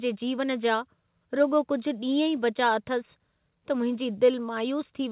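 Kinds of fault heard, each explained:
No faults can be heard in this speech recording.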